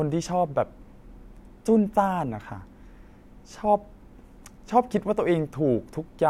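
No technical faults are audible.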